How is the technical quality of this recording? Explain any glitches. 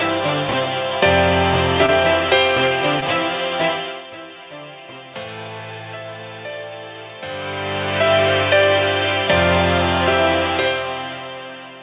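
The recording has two kinds of glitch, both brief, heard through a telephone-band call path that leaves nothing above 4 kHz, consistent with G.711 mu-law at 64 kbps.

Chunks out of order, 0.49 to 0.53 s: one block of audio about 21 ms long was written one block late, so it plays after the block that should follow it. Nothing is missing, but the sequence is scrambled and the three hard joins produce a quick jumbled stutter.

Short concealed packet loss, 1.86 to 1.90 s and 3.00 to 3.04 s: each time about 20 ms of the call failed to reach the decoder in time. The receiver patched the gap by extending the preceding sound, filling 20 ms at the first point and 16 ms at the second, then crossfaded back into the real signal. Each gap is heard as a tiny smear where the sound briefly wobbles instead of continuing cleanly.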